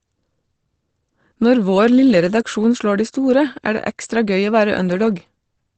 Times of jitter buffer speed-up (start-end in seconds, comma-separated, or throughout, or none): none